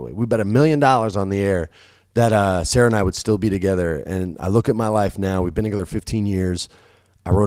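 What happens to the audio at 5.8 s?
At 5.77 to 5.81 s there is a short concealed packet loss: about 20 ms of the call arrived too late to decode, and the receiver patched it by extending the preceding speech before blending back. The result is a brief smear or wobble rather than the clean silence of an unconcealed dropout.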